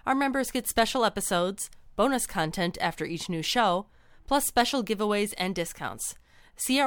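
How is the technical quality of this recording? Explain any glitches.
Nothing in the recording stood out as a technical problem on listening, so there are no glitches to explain.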